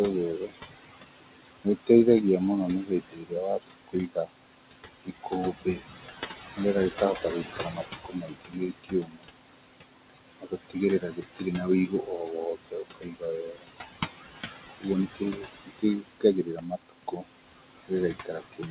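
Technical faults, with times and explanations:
Throughout, noise suppressor artifacts: the room noise, which sits about 8 dB below the speech, is pushed down by about 18 dB in the gaps and comes back up under the speech. The suppressor decides band by band and frame by frame what counts as steady noise. Within the narrowband call path, which carries nothing above 4 kHz, the effect sits on top of the usual coding noise.
0.4–0.98 s, 2.83–4.32 s (just after "mũno nĩ"), 5.05–5.81 s, 6.91–9.54 s, 10.39–13.69 s, 14.69–17.26 s and 17.85 s to the end, speech cut by the noise suppressor: the suppressor misreads parts of the speech as noise and turns them down with the background, by about 17 to 22 dB at the deepest points. The affected parts range from about a tenth of a second in the first span to roughly one and a half seconds in the two longest spans. Soft consonants and quieter stretches sound swallowed or faded out.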